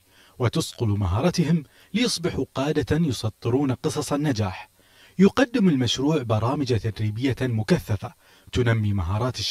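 Throughout the audio there is channel delay with comb filtering. One channel arrives around 10 ms behind the other, and when the two are folded to mono, what they share cancels at evenly spaced frequencies. The first notch falls near 50 Hz and the rest repeat about every 100 Hz above it, leaving the sound hollow and phasey. A spectrogram would show steady, evenly spaced dark horizontal bands running the full length of the clip.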